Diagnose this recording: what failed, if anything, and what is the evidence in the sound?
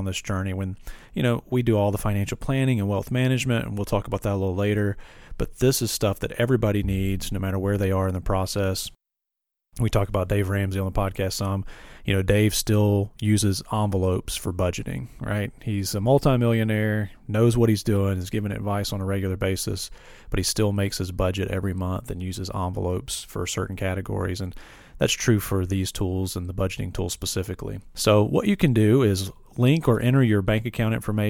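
Nothing failed; the speech shows no audible fault.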